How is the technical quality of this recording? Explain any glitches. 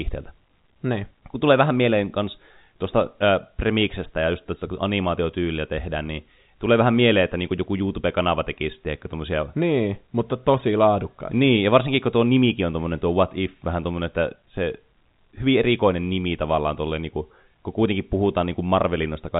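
No glitches can be heard.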